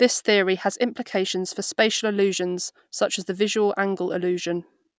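No technical faults can be heard anywhere in the speech.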